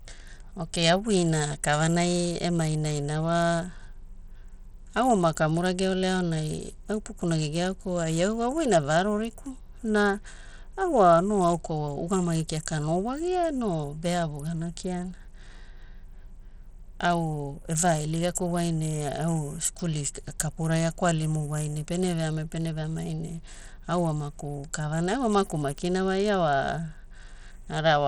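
Throughout the speech, the sound carries a plainly audible gritty, coarse texture, likely from Bluetooth SBC compression at a bit pool that fits about 80 kbps. Coarsely quantised sub-bands leave granular noise, which a spectrogram shows as speckled, patchy upper bands with nothing above 20.6 kHz.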